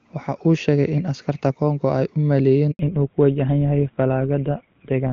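Right after "ay u", at 2.71 s, there's a handover gap: the call jumps networks and no speech frames arrive for about 80 ms, so the voice dies away within a few tens of milliseconds and stays silent until 2.79 s, and whatever was said in that slot is simply gone.

From 2.79 s to the end there's a fallback to narrowband. Before the switch the audio has that clean HD Voice quality, which fits AMR-WB near its top rate. Afterwards nothing above 4 kHz survives, so it turns dull and rougher, which points to GSM full rate at 13 kbit/s.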